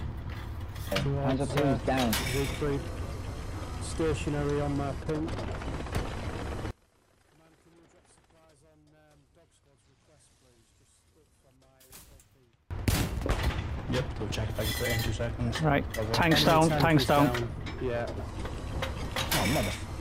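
From 6.71 to 12.71 s the sound collapses by about 30 dB to a faint residue, most likely because one channel is inverted and the shared content cancels in mono. A waveform shows a sudden, sharply bounded dip; a spectrogram shows the whole band fading.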